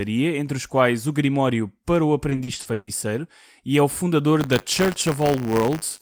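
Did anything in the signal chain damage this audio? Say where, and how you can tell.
Yes. Repeated packet loss (robotic sound) at the network stage, 2.29–2.89 s after "para o": seven gaps, longest 140 ms, patched by extending prior speech, so half the span is concealed.

Buffer tearing at the driver or buffer stage, from 4.4 s after "e é o fundador" to the end: a 100 Hz rattle as slivers of audio about 30 ms old splice in.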